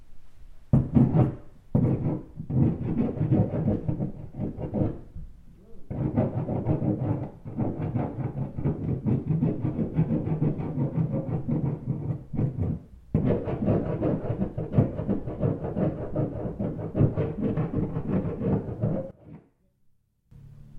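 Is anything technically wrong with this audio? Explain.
Yes. From 19.11 to 20.31 s the sound suddenly falls by about 22 dB to a faint remnant, its centred content gone. The likely cause is one channel inverted: with one side's polarity reversed, summing to mono cancels everything the channels share, leaving only their difference.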